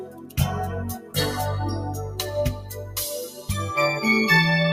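A noise suppressor applied to music or sounds runs throughout: a speech-tuned suppressor treats steady parts and decays as noise, so the level swings by around 10 dB as it clamps down and releases, giving a pumping, thinned-out sound.

Sound cut by the noise suppressor occurs at 0.00–0.38 s and 0.97–1.16 s, dipping about 11 dB, then at 2.57–2.96 s (about 5 dB) and 3.29–3.49 s (about 8 dB), where sustained material sinks and tails shorten abruptly.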